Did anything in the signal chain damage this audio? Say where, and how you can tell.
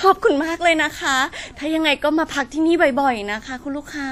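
Yes, codec stage: the speech rings and sounds washy throughout, with nothing above 15.4 kHz. This is likely WMA compression, its coarse quantisation fitting roughly 48 kbps.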